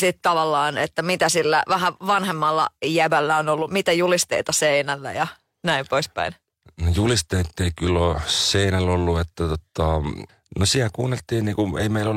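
Speech clip with a corrupt frame decoded at 3.61 to 3.66 s, between "vähän vanhemmalla jäbällä on" and "mitä julisteita seinällä ja": one damaged compressed frame produces a short misplaced burst, peaking around -15 dBFS.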